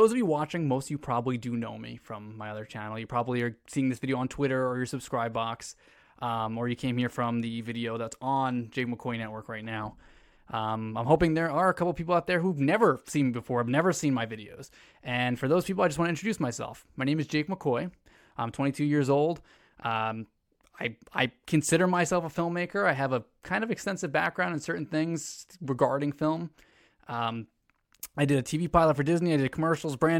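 No technical faults can be heard anywhere in the recording.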